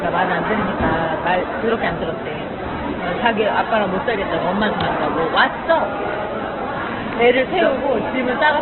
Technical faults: Opus compression; electrical switching spike

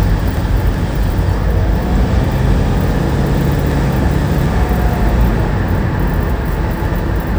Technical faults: chunks out of order

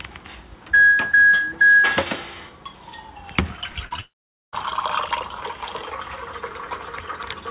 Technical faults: short concealed packet loss; burst of packet loss; long network dropout

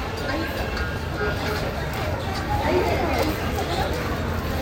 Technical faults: wrong sample rate

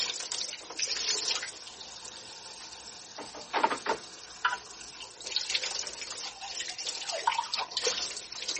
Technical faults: MP3 compression

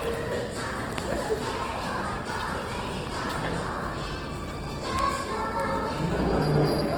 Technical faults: Opus compression; loud pop

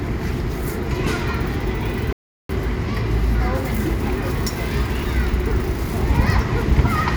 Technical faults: rebuffering stall

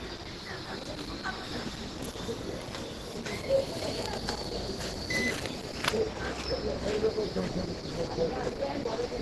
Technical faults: Opus compression

